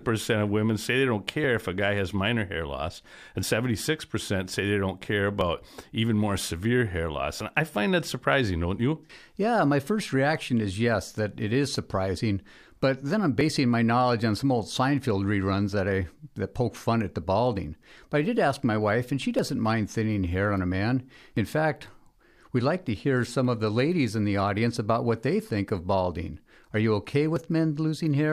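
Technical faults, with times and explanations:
1.44, 3.43, 5.41, 7.41, 13.41, 19.39, 21.37 and 27.36 s: overlap between stream segments. The speech skips at 2-second segment joins, including after "say they don't care" at 5.41 s, where overlapping time stamps make the player discard a few milliseconds of real audio, so the waveform jumps.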